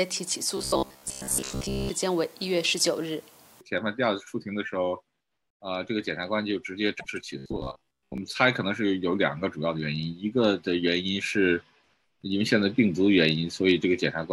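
From 0.57 to 1.89 s the sound turns into a rigid, metallic buzz at 66.7 Hz. It still follows the shape of the audio loosely. This is robotic sound from repeated short buffers. New audio likely arrived too slowly, so a slice of about 15 ms was played again and again. Its repetition rate sets the fixed buzz pitch. Most of the real audio in that stretch is skipped.

From 6.99 to 7.06 s there is a brief glitch and a jump forward. It points to a broken MP3 bit reservoir. Frames of about 26.1 ms were likely lost. The next frame then reached back for borrowed data and found the wrong bytes. That leaves a short glitch where the audio skips.

From 7.38 to 8.18 s the same 66.7 Hz robotic buzz returns. A short repeated slice likely again replaces most of the real audio.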